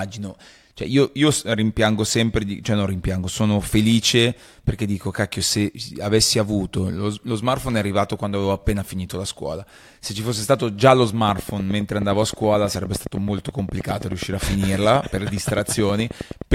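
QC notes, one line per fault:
11.29–16.53 s, train of clicks: A steady ticking runs over the speech for the last five seconds. The pulses come about 9.6 times per second, evenly spaced, some fifty in all. Each click has much the same sharp shape. They stand well above the speech level, so they cut through both the talking and the gaps. The cause is likely electrical interference from nearby equipment or a faulty connection or power supply.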